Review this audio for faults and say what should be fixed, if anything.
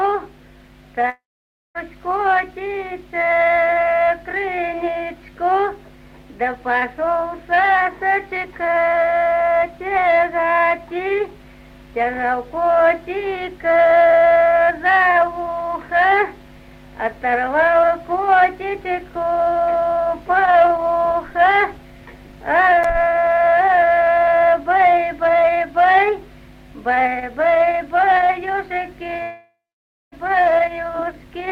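At 1.09–1.78 s and 29.23–30.15 s, sound smears into a fading buzz, then roughly half a second of silence, resuming with about 0.66 s and 0.9 s skipped: likely a long network dropout. Unlike brief packet loss, the fill-in gives out and the lost stretch never returns. Stronger redundancy or retransmission with a deeper jitter buffer would prevent this.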